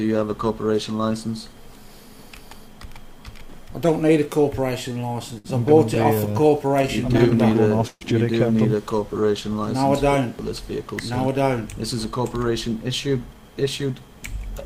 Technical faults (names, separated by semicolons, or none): repeated stalls (stutter); jitter buffer slow-down; jitter buffer speed-up